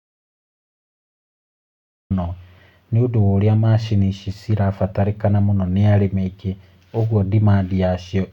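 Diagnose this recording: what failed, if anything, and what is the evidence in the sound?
The clip opens in an audio dropout to silence, already under way, lasting until 2.1 s. There is no room tone. The input was likely lost while the recorder kept writing silence.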